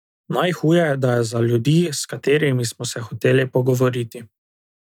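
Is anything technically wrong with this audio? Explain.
No, nothing technically wrong can be heard in this speech clip. Nothing in it points to a problem in how the audio was captured, processed or delivered.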